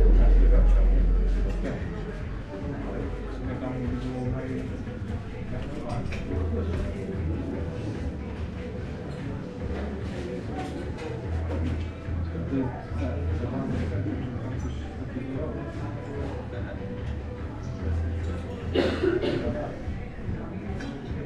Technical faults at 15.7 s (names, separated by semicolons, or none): compressed frames skipped